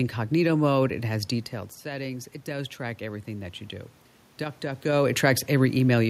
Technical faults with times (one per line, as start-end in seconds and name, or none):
1.82-3.64 automatic gain rising